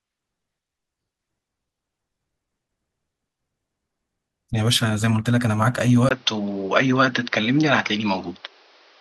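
At 6.09 s the speech drops out for a gap of about 20 ms, and from there to the end the sound is duller and narrower, with nothing above 6.2 kHz and a new background noise about 35 dB below the speech. The level stays roughly the same, so the change is one of tone and noise rather than loudness. The likely cause is an input switched to a poorer device partway through the recording.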